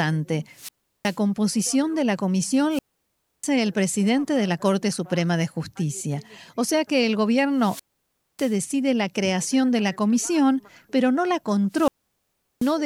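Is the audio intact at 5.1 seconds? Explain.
Yes, the speech at 5.1 s plays through intact, with no fault there.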